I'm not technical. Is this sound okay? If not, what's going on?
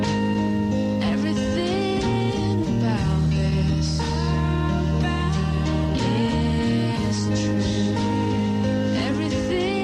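Yes, it sounds fine, with nothing that would trip up a listener or need fixing.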